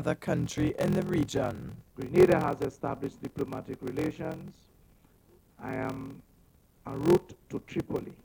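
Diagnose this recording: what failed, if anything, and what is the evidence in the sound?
A buffer-stage block size mismatch (padded) runs the whole way through. There's a steady buzz at 43.1 Hz, which fits a 1024-sample read, and everything plays at 0.861 speed with timbre intact. Each short written block gets zero-padded, leaving a tiny gap every cycle.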